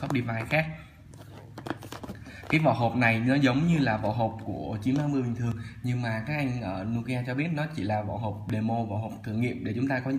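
Audio missing between chunks occurs at 2.54, 5.52 and 8.50 s: at each point roughly 20 ms of sound drops out and the edges butt together without a gap. The steady 3-second spacing is likely caused by data lost at each chunk boundary during capture or processing.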